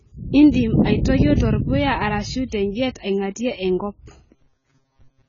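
Throughout, the speech has likely passed through heavy AAC compression at a low bitrate, which fits around 16 kbps, removing everything above 7 kHz and leaving it dull and smeared. From 4.36 to 5.28 s, short buffers of about 7.5 ms are likely replayed in place of most new audio, producing robotic sound from repeated short buffers: a rigid 134 Hz buzz.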